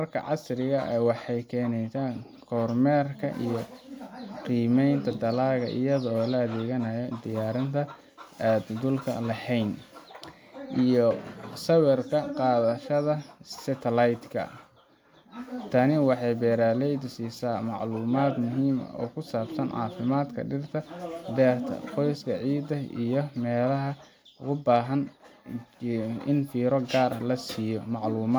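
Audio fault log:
No audible faults found anywhere in this recording.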